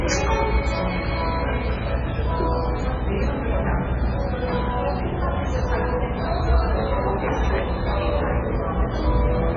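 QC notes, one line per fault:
Throughout: MP3 compression. The treble stops dead at 7.5 kHz, and what remains has a heavy watery, swirling texture, with metallic chirps on bright content and smeared attacks. This is likely a starved MP3 encode, which fits a very low bitrate of around 16 kbps. With so few bits, the encoder cuts off the top band and zeroes weaker frequency lines. Those lines flicker on and off from frame to frame, producing the swirl.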